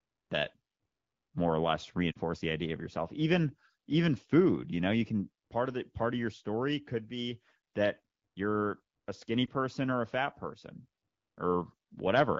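Lost AMR speech frames hit this speech recording: radio errors broke frames, so the AMR-WB decoder repeated its last good pitch and vocal-tract settings at lowered gain. That causes a brief dip at 2.11 to 2.17 s, fitting two dropped frames, and a shorter one at 9.46 to 9.49 s, fitting one.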